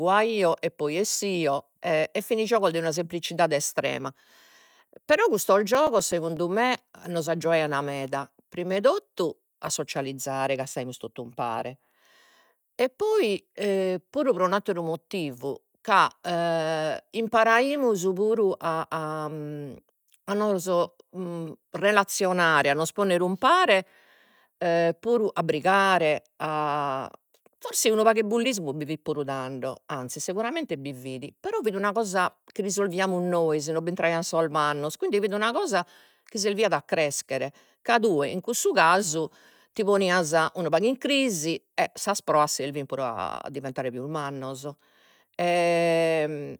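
Between 5.62 and 6.37 s, a blemish on the disc surface destroys more data than the player's error correction can rebuild, once per revolution. The player patches each damaged stretch by interpolating or muting it, producing CD scratch ticks: seven short clicks at roughly eight per second, the longest lasting only a few milliseconds. They vary in strength within that span, giving the speech a brief, regular ticking as the damaged spot passes under the laser.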